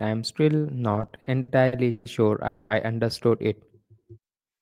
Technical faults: repeated stalls (stutter); call audio freeze

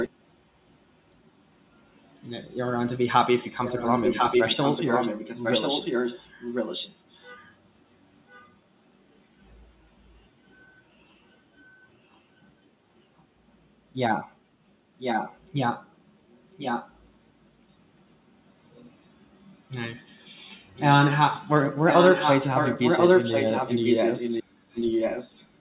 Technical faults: echo leak

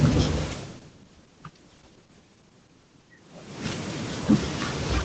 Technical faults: call bitrate drop

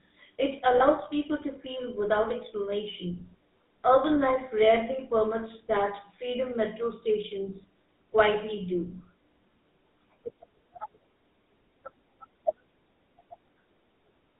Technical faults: GSM full-rate codec; lost GSM frames

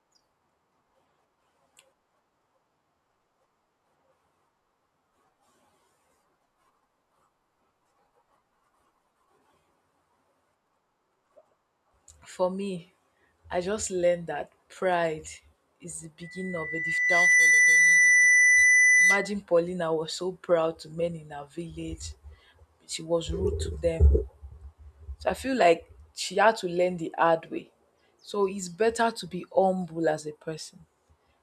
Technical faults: loudspeaker feedback squeal

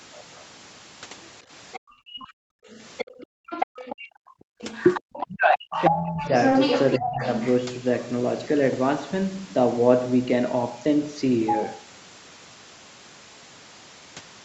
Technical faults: other side's voice leaking through; background gated by the echo canceller; speech suppressed in double talk; short concealed packet loss

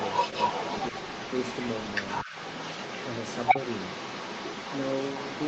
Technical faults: other side's voice leaking through

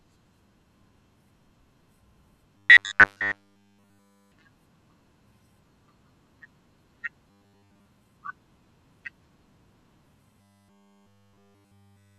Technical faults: robotic sound from repeated short buffers

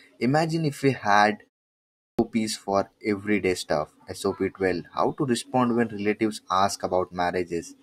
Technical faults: clipped start after a pause

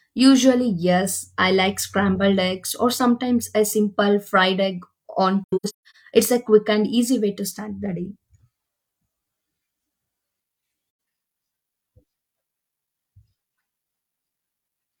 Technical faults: AAC frame loss with muting

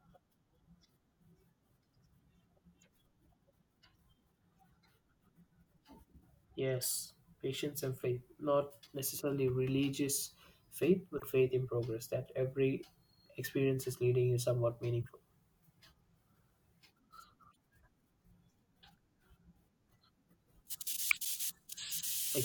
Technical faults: corrupt frame decoded

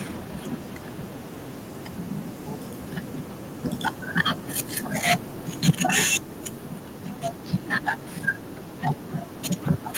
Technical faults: microphone overload; microphone volume stepped down

